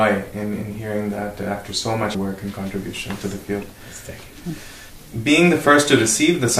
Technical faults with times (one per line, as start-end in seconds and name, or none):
2.14 audio missing between chunks